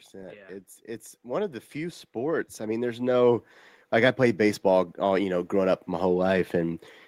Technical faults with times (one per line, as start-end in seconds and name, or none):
0.11-6.85 automatic gain rising